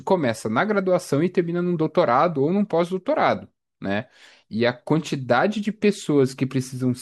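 Speech recording with no technical faults found.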